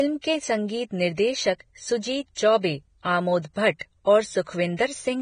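Speech, and it's damaged all the way through: nothing comes through above about 9.7 kHz, and what's left in the upper range sounds hissy and grainy, with the consonant attacks smeared and the tonal parts of the voice roughened. That points to heavy Vorbis compression as the likely cause. At a low bitrate, around 22 kbps, the encoder drops the top band and quantises the remaining treble so coarsely that fine detail turns into noise of similar energy.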